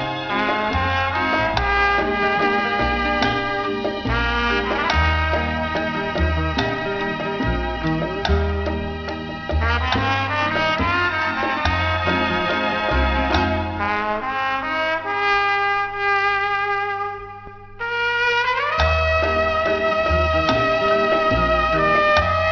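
Aliasing runs through the whole clip. The sound points to a sample-rate drop to about 11 kHz with no anti-aliasing filter, so content above 5.5 kHz folds back as unrelated tones, roughly 20 dB down, adding a gritty, metallic edge right up to the band limit.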